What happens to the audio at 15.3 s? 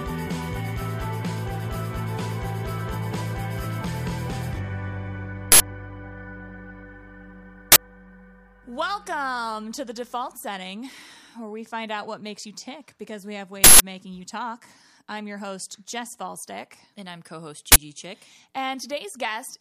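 Nothing goes wrong at 15.3 s; the audio plays through that moment intact, with no dropout, click, distortion or other fault.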